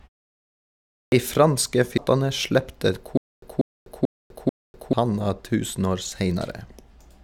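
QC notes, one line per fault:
1.04 s, clipped start after a pause: the sound kicks in abruptly after about a second of silence, missing its first 81 ms while the output device wakes back up.
1.98 s, damaged data in a compressed stream: a short glitch where the decoder hits corrupted frames, loses sync and jumps ahead to the next good header.
3.17 to 4.93 s, stutter with silent gaps: a 190 ms fragment repeats four times, each followed by 250 ms of dead silence, every 440 ms. The likely cause is a stalled player replaying its last buffer on each retry, and the audio from that stretch is lost.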